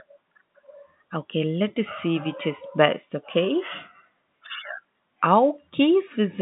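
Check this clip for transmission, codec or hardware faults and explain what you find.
No transmission, codec or hardware faults.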